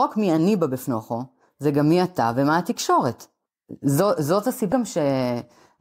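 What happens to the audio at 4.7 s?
At 4.72 s there is damaged data in the compressed stream: the decoder misreads a corrupted frame and resyncs, producing a brief chirp, squawk, click or short hole.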